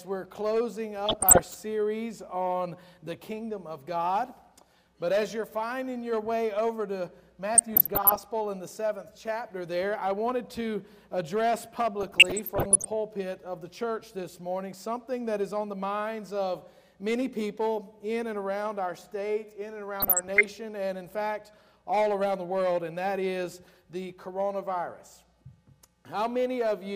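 DAB burbling at 1.06–1.54, 7.55–8.19, 12.00–12.86 and 20.00–20.45 s: residual bit errors, roughly under 1%, corrupt sub-band data, giving short noise blips and brief sub-band level jumps rather than the silent gaps of dropouts.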